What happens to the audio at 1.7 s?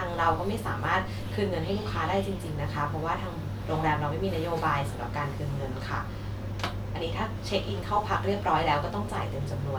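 At 1.7 s the speech runs on cleanly, with no dropout, click, distortion or other audible fault.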